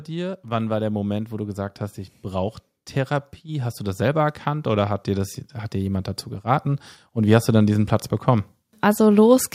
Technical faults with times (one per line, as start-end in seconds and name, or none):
0.07-2.58 automatic gain rising
3.44-9.50 automatic gain rising